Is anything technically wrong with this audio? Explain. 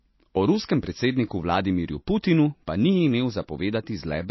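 Yes. Throughout the clip the speech carries plainly audible compression damage, most likely from MP3 compression at a low bitrate, with the sound pointing to something around 24 kbps. Starved of bits, the encoder discards everything above 5.8 kHz and drops quieter frequency lines that flicker in and out between frames. This gives the speech a dull, watery, swirling quality with smeared onsets. On a spectrogram, energy stops at a flat ceiling near 5.8 kHz, and the area beneath is spotted with patchy, blinking gaps.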